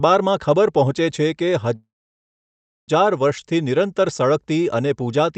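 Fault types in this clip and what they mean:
Call audio freeze: 1.75 to 2.90 s, sound stalls into silence, likely from a starved jitter buffer; it resumes where it stopped, adding delay, losing nothing.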